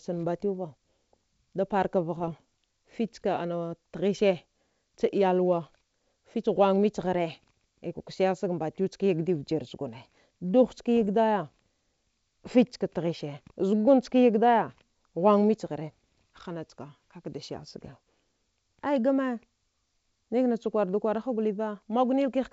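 Speech carried over a G.722 wideband path, with three short damaged stretches. They come at 2.17 to 2.34 s, 10.97 to 11.05 s and 17.81 to 17.88 s. Each is heard as pops and a rough, gritty burst with brief jumps in level. These are bit errors on an ADPCM link. A flipped bit misleads the decoder's predictor and step size, so the damage rings on briefly. The error rate sounds low, well under one percent. The burst at 10.97 s has the highest error rate, about 0.3 percent.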